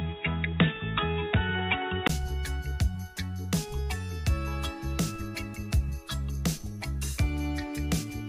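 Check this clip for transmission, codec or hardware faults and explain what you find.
One fault is present. From the start to 2.09 s, the input has likely switched to a poorer device. The band stops at 3.8 kHz and there is a faint noise floor, making the sound dull and boxy. A spectrogram shows a hard ceiling that lifts after a 20 ms gap at 2.09 s, where the waveform's level shifts noticeably.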